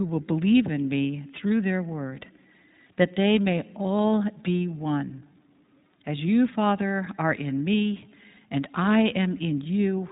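Throughout the speech, the iLBC codec is plainly audible. Nothing above 3.8 kHz survives, so the sound is narrowband and slightly rough and synthetic, consistent with 20 ms frames coded independently at roughly 15 kbps. A spectrogram shows a hard ceiling near 3.8 kHz with empty bands above.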